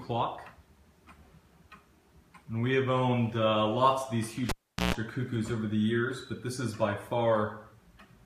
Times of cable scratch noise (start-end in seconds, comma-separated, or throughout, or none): none